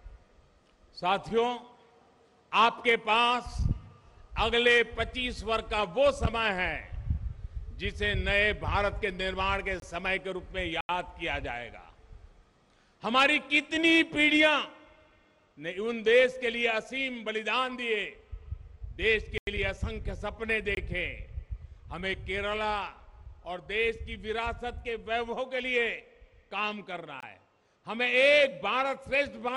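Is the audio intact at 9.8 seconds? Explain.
No. From 9.80 to 9.82 s there is a block of digital silence lasting about 23 ms, which fits an output buffer of 1024 samples that was not filled in time. The audio cuts out and back abruptly, leaving a brief hole.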